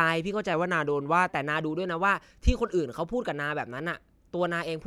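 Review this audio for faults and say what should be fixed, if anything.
From 0.54 to 1.30 s the speech slows by about 6.4% and drops in pitch by 114 cents, a little over a semitone, then snaps back. This is a drift correction step, likely a clock-matching resampler that changed its playback rate in a single jump to manage its buffer. On a spectrogram the harmonic stack steps down at the start of that span and jumps back up at its end, and the waveform there looks slightly stretched. Prevent it by having the drift compensation adjust the rate in small, gradual increments.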